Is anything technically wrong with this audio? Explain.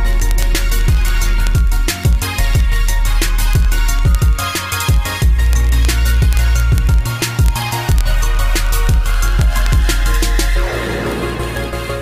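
Yes. Word clock ticks run from 0.11 s to 12.0 s, a steady, rapid ticking. The unlocked receiver drops or repeats one sample roughly every 20 ms.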